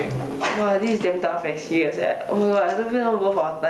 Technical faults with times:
0.00-3.70 gain pumping

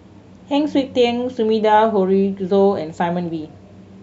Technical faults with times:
none

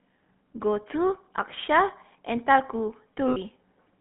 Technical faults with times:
0.00-4.00 GSM full-rate codec
3.28-3.37 lost GSM frames

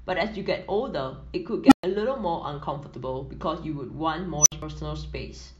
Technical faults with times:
1.66-1.83 unstable filter
4.39-4.52 unstable filter
4.62 compressed frames skipped

